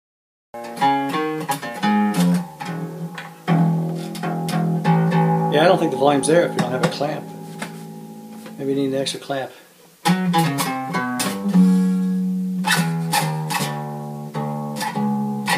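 The audio opens on digital silence until 0.54 s, then jumps straight into sound already under way: a cut-off start, where capture began late and the natural onset is missing.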